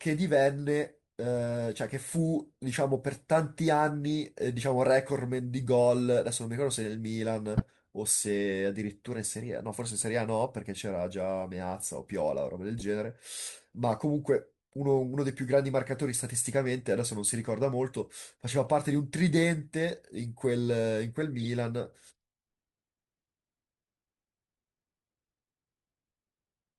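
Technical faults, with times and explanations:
7.57–7.65 s, 12.78–12.82 s, 18.63–18.69 s and 21.40–21.48 s: corrupt frame decoded. Each is a brief chirp or burst of noise cutting across the speech. Damaged bits in a compressed frame were decoded anyway. Misread gains and codes put energy at the wrong frequencies. Each burst lasts a few frames, 40 to 80 ms. The first is loud, near -10 dBFS. The later three are much quieter.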